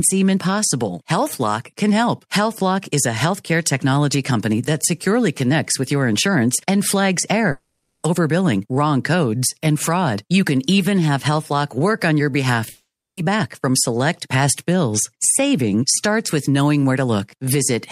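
At 7.51 s and again at 12.69 s the speech breaks off, likely from a long network dropout. From 7.51 to 8.05 s the last sound is stretched into a fading buzz. From 12.69 to 13.19 s the buzz dies into about 0.29 s of silence. Speech resumes with the gap's content missing.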